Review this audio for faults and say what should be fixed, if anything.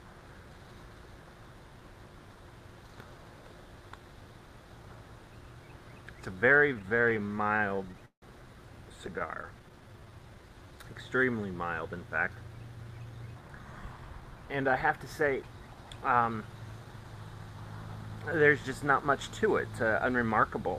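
From 6.53 to 8.24 s there are repeated stalls (stutter): 21 short gaps, the longest 165 ms, where late packets left the jitter buffer empty and the receiver stretched the last sound. Those gaps add 386 ms, about 23% of the span, with nothing lost. A lighter burst of 7 gaps, none over 12 ms, runs from 9.02 to 9.72 s. Give the receive path a steadier packet rate or a larger initial buffer target so the buffer does not drain.

From 8.98 to 11.38 s a jitter buffer slow-down plays the audio at 90% speed without changing pitch. The receiver repeats pitch periods to rebuild its reserve, adding 252 ms. Sounds are drawn out, and this overlaps the second stutter burst. Raise the buffer target earlier and more gradually so that refilling does not need a long stretch of time-scaling.

From 13.98 to 17.40 s and from 18.30 to 20.34 s a jitter buffer speed-up runs the audio at 105%. The receiver trims pitch periods to shed excess delay, removing roughly 200 ms and then 100 ms, so the audio sounds slightly hurried. 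Lower the buffer target slowly, or spread the delay reduction across quieter passages, to avoid this audible catch-up.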